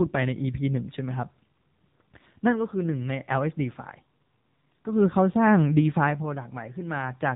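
AMR narrowband mobile codec damage runs throughout this speech clip: nothing above 4 kHz survives, and the low bitrate, which fits about 7.4 kbps, leaves the voice plainly buzzy and synthetic.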